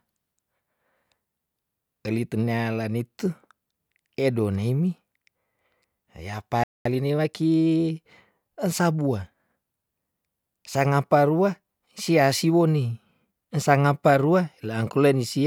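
At 6.64 s the speech cuts out in mid-flow and the output stays silent until 6.85 s, a gap of about 220 ms. This is a playback stall. The player's output path stopped delivering samples for that interval, most likely because its buffer ran dry or the audio thread was held up.

From 6.85 s to 7.71 s the player makes up the lost time with time-compressed catch-up. To drain the backlog left by the stall, it removes short slices of the signal and cross-fades across each cut. This runs the speech at 1.25 times its normal rate without shifting pitch. The passage sounds rushed until normal pacing returns at 7.71 s.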